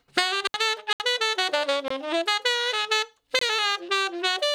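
There's an intermittent contact at 0.43 to 0.58 s, where a loose plug or cable seems to open the line for about 69 ms. The audio drops out with crackle at both edges, leaving faint hiss while the connection is broken. Beyond that come three blocks of digital silence: a 70 ms hole at 0.93 s, then shorter 23 ms gaps at 1.88 s and 3.39 s. Each one cuts to silence and back with no fade. The short ones match a 1024-sample buffer, which points to the output buffer not being filled in time.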